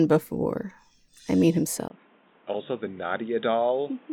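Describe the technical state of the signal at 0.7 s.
At 0.7 s the speech signal is intact, with no technical fault present at that moment.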